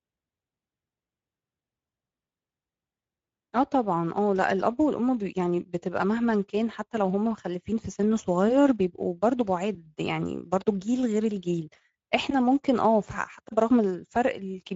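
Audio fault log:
throughout: Speex codec. The speech has a plainly audible coarse, grainy hoarseness, because this CELP coder has too few bits to rebuild the excitation cleanly. The damage level points to a middle setting, which fits roughly 16.8 kbps. Nothing sounds above 7.7 kHz. The top octave below that has the hissy, shaped-noise quality of a synthetic fill rather than real detail.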